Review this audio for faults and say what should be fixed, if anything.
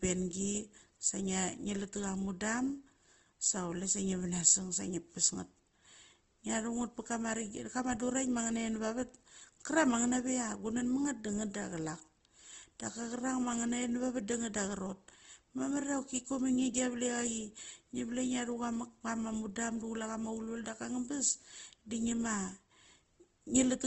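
Likely Opus compression, throughout: nothing above 8.1 kHz, and the speech sounds grainy and rough where thin bands are filled with folded or noisy content, which fits about 16 kbps.

To prevent it, encode the speech at a higher Opus bitrate and keep an uncompressed source for any re-encoding.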